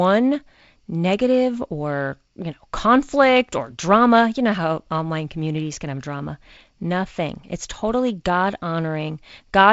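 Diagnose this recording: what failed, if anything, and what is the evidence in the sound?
Nothing has failed: the speech has passed through G.722 wideband telephone coding, with its band ending at about 7.7 kHz and the light upper-band hiss and slightly noisier lower band that point to the 48 kbit/s mode.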